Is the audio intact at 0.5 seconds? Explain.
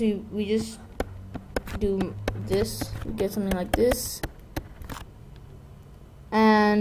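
Yes, the audio is intact at 0.5 seconds, with no fault to be heard at that moment.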